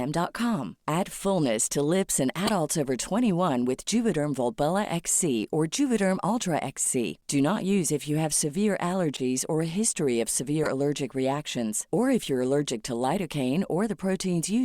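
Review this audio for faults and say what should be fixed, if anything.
Bit errors in compressed frames were played as valid data, so the corrupt frame decoded puts energy at wrong frequencies, heard as short bursts lasting a few frames each: 2.46–2.50 s after "fullness to lips in" (peaking near about −10 dBFS), 9.14–9.20 s between "if you have severe" and "or a history", and 10.63–10.69 s before "allergic reactions or if". Add error detection, such as per-frame checksums, so damaged frames are concealed or muted instead of decoded.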